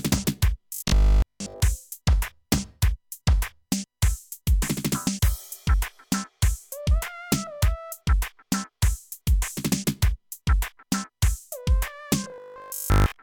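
From 0.74 to 1.60 s, and again from 12.24 s to 13.22 s, the sound collapses into robotic sound from repeated short buffers: a rigid, metallic buzz pitched at 50 Hz. The likely cause is audio arriving too seldom, so the same 20 ms slice is looped and most of the real audio is dropped. Unlike codec warble, the buzz holds one fixed pitch throughout and never drifts.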